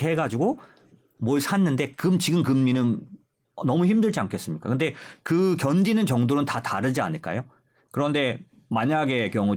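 Nothing stood out on listening to this speech, which comes through Opus voice compression.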